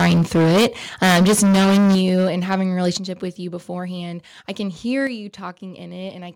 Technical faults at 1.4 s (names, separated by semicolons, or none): microphone overload